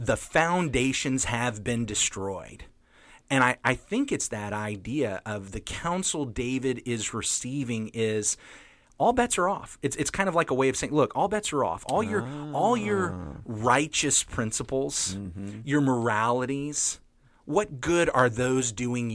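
The recording carries no audible technical fault at any point, with the signal holding steady and continuous throughout.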